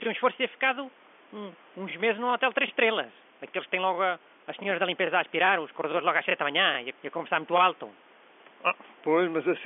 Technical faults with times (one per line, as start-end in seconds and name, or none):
none